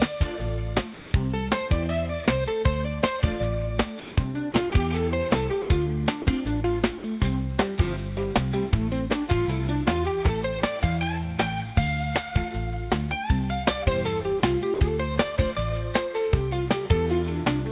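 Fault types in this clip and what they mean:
Sound dropped by the voice detector: short gaps filled with steady comfort noise, likely the sender's detector mistaking sound for background, seven times between 0.94 and 14.8 s.
Sound chopped by the voice detector: from 4.52 to 4.72 s the sound turns choppy, likely the detector flicking on and off and patching in brief synthetic noise.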